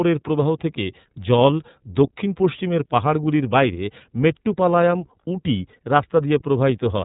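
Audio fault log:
Throughout, iLBC codec: the speech is band-limited to narrowband, with nothing audible above 4 kHz, so sibilants and consonant edges lose their brightness. The codec models each frame's excitation independently rather than predicting from the previous one, which gives the plainly audible rough, slightly synthetic texture heard across the clip. The character fits iLBC's 30 ms frame mode at around 13.33 kbps, where coarser excitation coding makes the roughness more apparent.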